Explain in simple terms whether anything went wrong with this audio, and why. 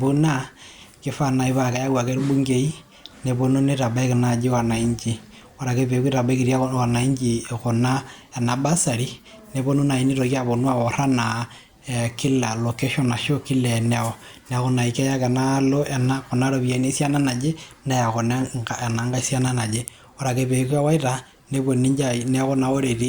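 Listening to this speech recording, nothing stood out as having gone wrong.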